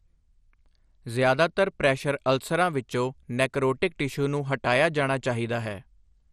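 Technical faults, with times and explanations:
Throughout, MP2 compression: the speech sounds dull and gurgling, with a grainy edge. The likely cause is MPEG Layer II coding short of bits, consistent with about 64 kbps. A spectrogram shows a hard ceiling at 13.6 kHz, with upper sub-bands flickering on and off.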